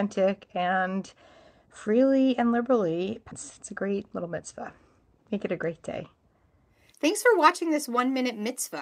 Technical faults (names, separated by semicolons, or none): skip ahead; jitter buffer speed-up